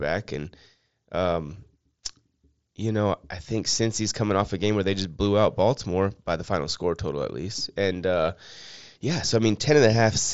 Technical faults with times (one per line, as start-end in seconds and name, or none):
none